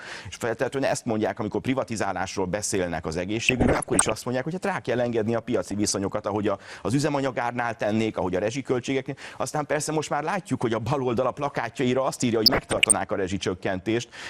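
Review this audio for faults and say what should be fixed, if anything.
Dull, gurgling graininess runs throughout, with upper bands flickering off. This is likely MP2 compression, pointing to about 80 kbps. Unlike burbling, it is constant. Encode at a higher bitrate.

DAB burbling appears at 3.37–4.12 s, 5.68–5.94 s and 12.43–12.96 s. Uncorrected bit errors, suggesting a rate under one percent, corrupt samples, causing brief noise blips in single sub-bands. Improve reception or the antenna.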